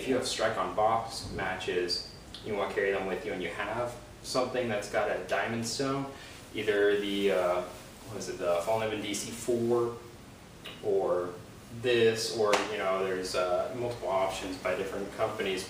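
No technical faults can be heard anywhere in the audio, with no point at which the signal breaks up, drops out or changes character.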